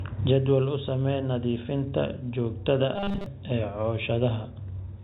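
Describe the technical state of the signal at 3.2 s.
At 3.2 s the signal is inside a stretch of robotic sound from repeated short buffers, running from about 2.96 to 3.26 s, just after "samee nadiifinta joogtada". Fresh audio is likely arriving too late, so playback keeps looping the last block, roughly 5 ms long, in place of most of the real speech. That loop imposes a fixed 200 Hz buzz, turning the telephone-band speech into a stiff, metallic drone that only loosely tracks the syllables.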